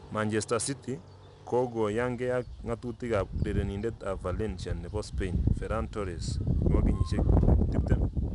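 From start to finish, 4-bit ADPCM compression leaves gritty hiss riding every loud syllable and smeared attacks. Unlike steady quantisation noise, it tracks the signal level. Nothing is present above 10.6 kHz, fitting a rate near 88 kbps.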